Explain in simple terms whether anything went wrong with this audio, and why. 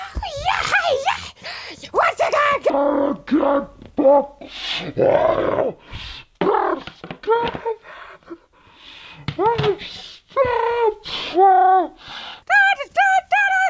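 Something did go wrong. From 2.70 s to 12.42 s the clip has a wrong sample rate fault: the audio plays at exactly half speed and sounds a full octave (12 semitones) lower. That fits sound recorded at 32 kHz being played back at 16 kHz with no conversion. What sets it apart from a simple pitch change or a slow-down effect is that both happen together, in lockstep.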